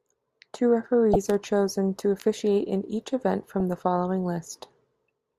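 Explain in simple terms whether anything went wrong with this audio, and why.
Two brief bursts of DAB burbling interrupt this speech. The first runs from 1.13 to 1.16 s, just before "are chosen to officiate", and the second lands at 3.60 s, between "officiate in each event" and "the following". Weak digital radio reception let a small share of corrupted bits slip past error correction, so short blips of noise appear in narrow frequency bands. The result is short noisy blips rather than the clean click or silent gap of a simple dropout.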